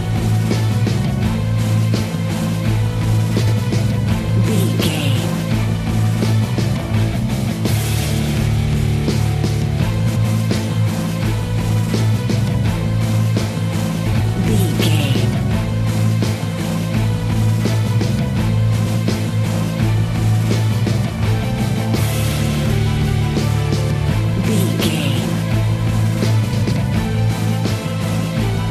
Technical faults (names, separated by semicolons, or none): frames out of order